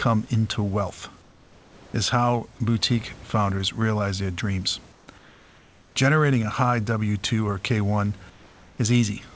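Comfort noise replaces the room background at 1.22–1.94 s (between "into wealth" and "is how boutique founders"), at 4.92–5.08 s and 5.18–5.96 s (after "founders realize their dreams"), and at 8.30–8.78 s. Each gap is filled with steady, featureless hiss about 2 to 4 dB quieter, likely from discontinuous transmission. On a spectrogram these stretches show as smooth, uniform noise bands without the room's texture, and on the waveform as a slightly lowered, even floor.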